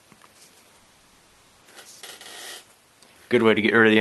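A call audio freeze runs from 0.79 to 1.63 s: the sound holds and smears into a fading buzz for about 0.82 s, likely because packets stalled and the jitter buffer ran dry. When it resumes, nothing is lost. The audio simply carries on late, pushed back by that gap.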